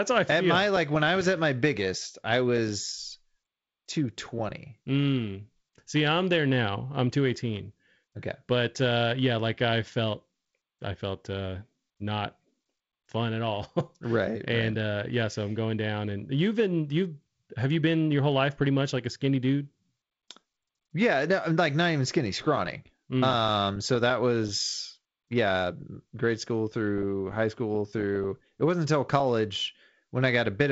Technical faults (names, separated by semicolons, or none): none